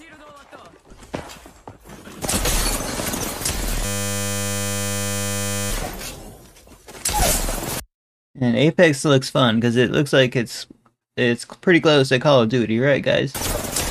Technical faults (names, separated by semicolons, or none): system hang loop